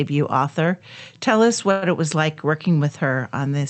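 At 1.71–1.84 s a call audio freeze, likely from late packets emptying the jitter buffer, inserts a fading 0.11 s buzz, shown as smeared, decaying spectrogram bands before speech resumes.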